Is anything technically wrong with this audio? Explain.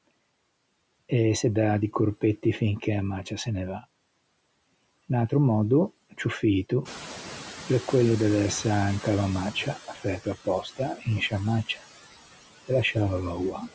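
Yes. Three kinds of noise-suppressor fault are audible in this speech recording.

Noise suppressor artifacts run through the whole clip. The suppressor pulls down the bands it judges to be steady noise by about 19 dB, frame by frame, so the background sinks in pauses and swells back under the talking. It is a constant pumping that follows the speech, not a single event, which separates it from the timed faults below.

The noise suppressor is catching up from 6.85 s to 9.8 s, starting just after "ciù fito". At about 7.0 s the room noise jumps by roughly 13 dB, and the suppressor's noise estimate lags. The louder background passes through with only about 11 dB of reduction, then fades over roughly 2.95 s as the estimate adapts. The audible sign is a gradual settling after a sudden rise. The speech level stays put, and only the noise sinks.

Speech is cut by the noise suppressor at 9.88–10.05 s (about 9 dB down), 10.45–10.8 s (about 17 dB), 10.96–11.07 s (about 11 dB), and 13.52–13.63 s (about 7 dB). 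The second and third cuts come just before "in sciâ". In each case roughly a tenth of a second of quiet speech was treated as noise and turned down with the background, so the affected speech sounds swallowed. These dips hit the voice itself, while the catching-up fault only changes the noise level.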